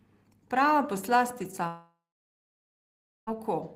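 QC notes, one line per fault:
1.67–3.29 s, long network dropout: the sound smears into a fading buzz, then about 1.3 s of silence. Likely lost packets, so about 1.6 s never returns.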